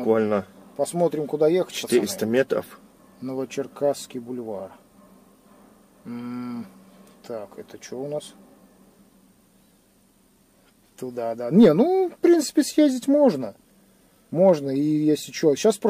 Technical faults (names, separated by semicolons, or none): none